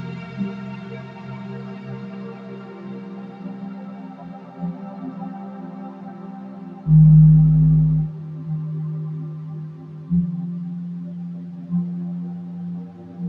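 A noise suppressor built for speech has been applied to this music or other sound throughout. It treats sustained tones, ambience and reverb as noise and pulls them down. Onsets pass, but held sound and decays sink by about 10 dB. The result pumps and thins.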